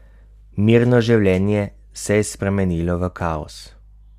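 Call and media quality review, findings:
No faults found on review of the speech path; nothing to escalate.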